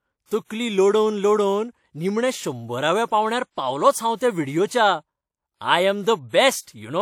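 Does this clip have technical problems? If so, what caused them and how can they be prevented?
Yes, there's a block size mismatch (truncated) buzz at about 43.1 Hz all the way through the speech, which fits 1024-sample blocks having their ends chopped off. Make sure every stage agrees on block size.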